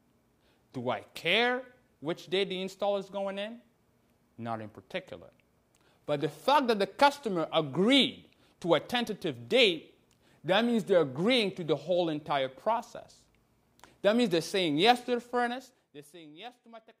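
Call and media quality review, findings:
Nothing stood out on listening to this clip.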